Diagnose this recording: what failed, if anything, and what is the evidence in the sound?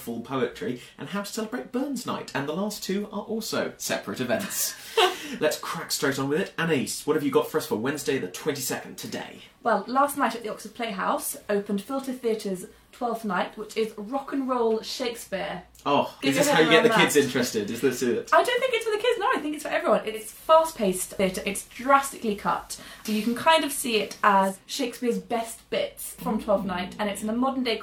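The failure is at the receiver, before capture. At 20.04 s the audio shows digital radio blending to analogue. The receiver loses its digital stream and cross-fades over about 350 ms to the station's FM broadcast. Hiss appears, roughly 35 dB below the signal. The level shifts by about 4 dB. At 24.64 s the digital signal returns, and the receiver blends back, restoring the quiet floor.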